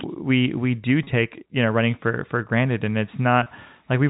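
Speech over a telephone-band line, and there's packet loss with pitch repetition twice: at 1.04 to 1.07 s and again at 3.43 to 3.46 s. Each 30 ms gap, which fits about three 10 ms packets, gets bridged by repeating the last pitch period, so you hear a brief held, buzzy moment.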